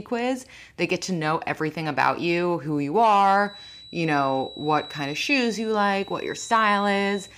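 A thin, steady whistle near 3.9 kHz enters at 3.38 s, just after "about you who you", and continues to the end of the recording. It sits roughly 20 dB beneath the speech and swells and fades slowly in level without ever building into a howl. This is a feedback whistle, likely caused by a loudspeaker-to-microphone loop held right at the edge of feedback, so a single high frequency keeps ringing instead of running away into a howl.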